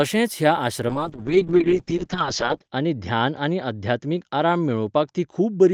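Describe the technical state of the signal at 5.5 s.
At 5.5 s the speech is inside a call bitrate drop that begins at 0.88 s and lasts to the end of the clip. The encoder's budget fell from 32 kbps to 7 kbps, bottoming out for 1.8 s, so the codec quantises coarsely and discards highs. It sounds muffled and watery. On a spectrogram the content stops abruptly near 8 kHz, down from 20 kHz, and fine harmonic detail looks blurred into blocky smears.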